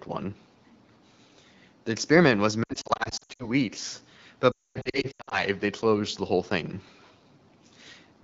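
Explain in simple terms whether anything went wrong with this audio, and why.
Lost AMR speech frames: after "experiment was" (2.63 to 3.48 s) the speech warbles and dips, then just before "they closed the whole" (4.52 to 5.43 s) it drops out to near silence. Radio errors wiped out chunks of the signal, so the phone's decoder had to guess, stretching the last good sound.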